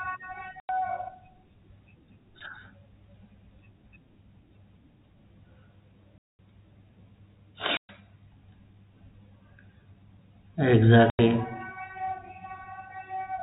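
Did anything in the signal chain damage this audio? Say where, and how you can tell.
Yes, on the network side: packet loss filled with silence leaves hard-edged holes at 0.6, 6.18, 7.77 and 11.1 s, lasting 90, 210, 120 and 90 ms. Those lengths fit 30 ms packets going missing and being replaced with silence, over the narrowband G.711 telephone coding.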